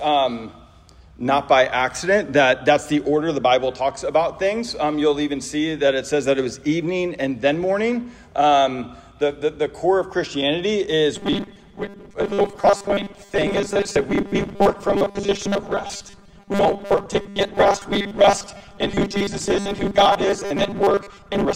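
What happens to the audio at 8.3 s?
Nothing goes wrong at 8.3 s: the audio plays straight through that moment with no dropout, click, glitch or other audible fault.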